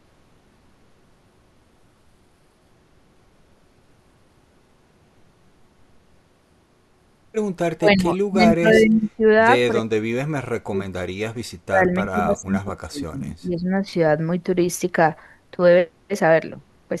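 From 7.69 to 9.23 s, 9.72 to 10.99 s and 11.65 to 13.86 s, the speech sinks. The first and third stretches drop by about 30 dB at their deepest, and the middle one by about 40 dB. This is speech suppressed in double talk, likely caused by an echo canceller that could not separate this talker from far-end echo while both sides spoke and turned everything down.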